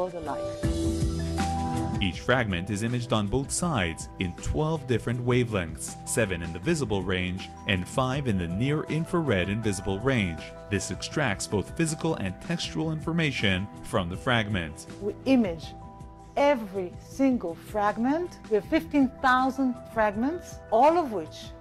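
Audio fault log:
No faults detected in this recording.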